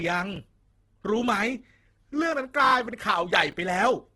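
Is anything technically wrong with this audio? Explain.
Yes. Throughout, the speech sounds rough and grainy, with no content above 12.1 kHz. The likely cause is heavy Opus compression in its music (CELT) mode, which fits a low bitrate around 12 kbps: starved bands get filled with folded or noise-like energy.

From 3.51 to 3.53 s there is a brief jumbled moment. Chunks out of order cause it: an 11 ms chunk plays one chunk late, after the one that should follow it. Nothing is lost, but the swap creates three hard joins.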